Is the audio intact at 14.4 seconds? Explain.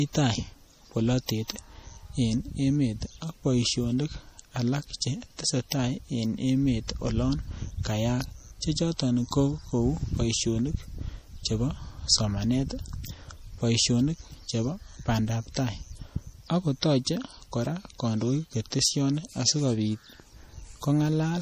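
No. At 14.4 seconds, as across the whole clip, the speech carries MP3 compression damage, likely from an encoder starved of bits, which fits a rate near 40 kbps. Weak frequency lines are zeroed and flicker frame to frame, so the sound turns watery and swirly, with metallic chirps on s sounds and smeared onsets. On a spectrogram the energy stops at a flat ceiling at 15.2 kHz, with blotchy, speckled holes below it.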